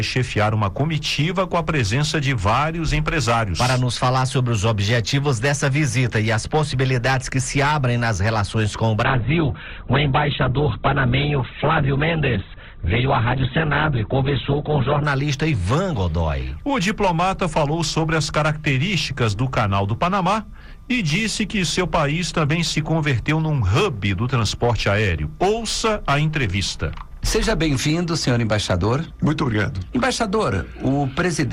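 From 9.04 s to 15.04 s, the adaptive stream dropped to a lower bitrate, the kind of switch a player makes when the connection slows and it fetches a leaner encoding. The result fits a step down from a comfortable Opus rate to one near 8 kbit/s. The sound turns dull and thin at once, with nothing above 4.2 kHz and a grainy, synthetic coding texture, then snaps back to full quality at 15.04 s with no gap on either side.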